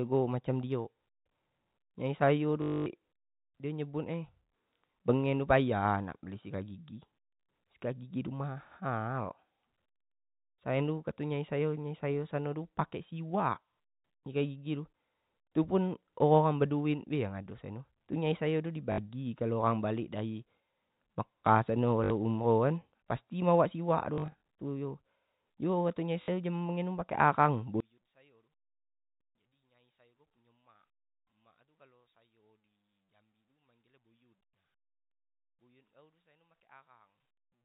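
Packet loss with last packet repeated: the receiver lost audio and replayed its last packet until new ones arrived. Each gap fits 20 ms packets, so the speech stutters robotically with a 50 Hz buzz. This happens at 2.62 to 2.86 s (240 ms), 18.92 to 18.98 s, 22.04 to 22.10 s just after "mekah sano", 24.14 to 24.41 s just after "pasti dibawak" (160 ms in short runs of up to 40 ms), and 26.22 to 26.28 s. From 27.80 s to the end, the speech drops by about 35 dB and turns faint, which is likely one channel inverted, cancelling the centred speech when the channels are summed through the G.711 A-law telephone path.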